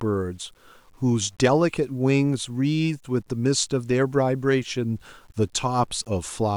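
A speech recording that sounds grainy and gritty from start to finish, with the roughness shifting as the voice changes and quiet tails breaking up. It is likely low bit depth without dither, with truncation to roughly 9 bits leaving signal-dependent error about 40 dB down.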